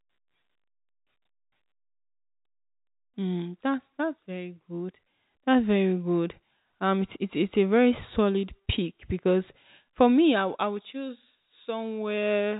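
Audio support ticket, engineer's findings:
No faults found: the speech sits within a standard telephone band with nothing above 3.8 kHz, consistent with G.711 telephone coding at 64 kbps, and any coding damage is at most faint.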